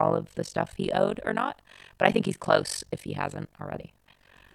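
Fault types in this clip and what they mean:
overlap-add ripple: frames rejoined with an overlap that doesn't sum to constant gain, so level dips about 60 dB roughly fifty times a second, giving robotic flutter throughout.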